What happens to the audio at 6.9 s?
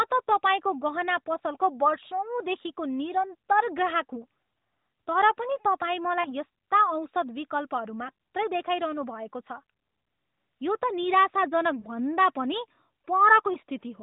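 Nothing goes wrong at 6.9 s: the speech carries straight through that moment with no dropout, click or other fault, only the narrowband character of the AMR-NB mobile codec running at 12.2 kbps.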